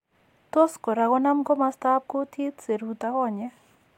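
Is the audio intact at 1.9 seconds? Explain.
Yes, at 1.9 seconds the speech is intact, with no audible fault at that moment.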